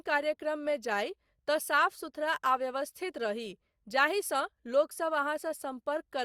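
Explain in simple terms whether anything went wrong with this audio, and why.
Nothing went wrong; this speech recording has no faults.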